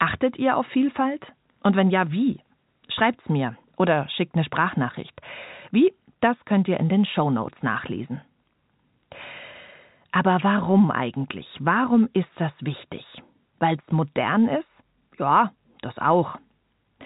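No technical faults are audible.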